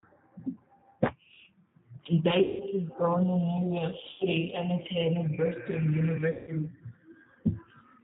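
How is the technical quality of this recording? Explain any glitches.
The recording is narrowband and low-bitrate throughout, and has three dropouts where lost audio has been filled in synthetically.

G.729 codec: the whole clip has plainly audible coding damage. Everything above 4 kHz is missing, and the speech sounds rough and slightly synthetic because it is rebuilt from a vocal-tract filter, a pitch predictor and a few pulses per frame, consistent with 8 kbit/s G.729A.

VoIP packet loss concealed by the speech codec: there are three gaps, at 2.42–2.64 s just before "was born" (about 180 ms of audio lost), at 4.12–4.26 s just before "and attended" (80 ms), and at 6.31–6.51 s (160 ms). In each, the decoder extends its last pitch and filter state with falling gain, producing a buzzy tone or coloured noise that fades. The speech that follows stays weak or distorted briefly as the decoder recovers.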